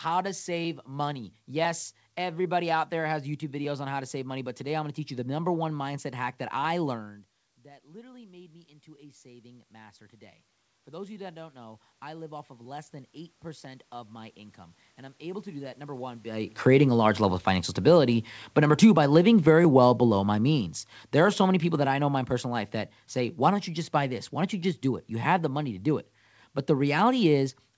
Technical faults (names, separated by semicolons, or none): automatic gain rising; automatic gain falling